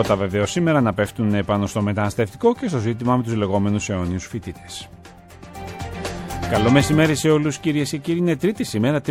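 Nothing is technically wrong with this audio clip; there is no fault to place in time or trace to a cause.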